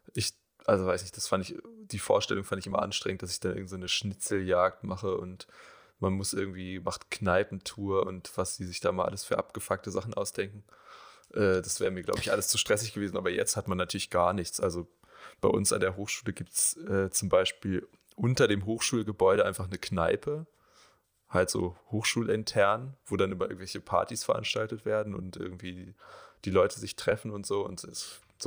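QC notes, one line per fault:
Throughout: crude rate conversion. A gritty, inharmonic fizz rides on the speech and follows its loud and bright parts. It sits roughly 20 dB below the signal. It points to linear interpolation without filtering, which fits a change from 32 kHz to 44.1 kHz.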